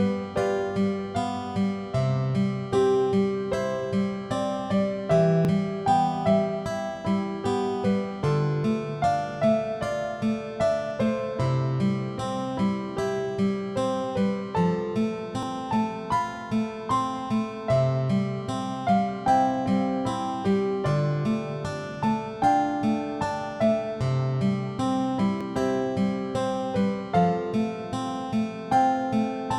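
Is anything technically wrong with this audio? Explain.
Yes. At 5.45, 15.43 and 25.41 s there are brief skips from audio missing between chunks, spaced about 10 s apart. The likely cause is a recorder or processor handling the signal in 10-second blocks and dropping a short stretch, around 20 ms, each time one block closes and the next opens. The surrounding audio is butted together with no gap, so each point is heard as a small jump in the sound.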